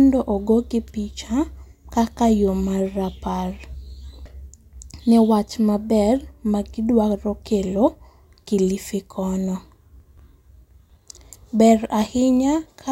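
Nothing stood out when listening to this speech recording.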